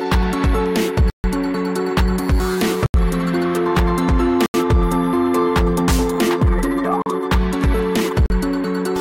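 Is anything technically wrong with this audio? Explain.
Yes. The output was given runs of zeroed samples instead of audio, producing blocks of digital silence at 1.10 s (140 ms), 2.86 s and 4.46 s (80 ms each), and 7.02 s and 8.26 s (40 ms each). Each hard cut to and from silence is heard as a brief hole.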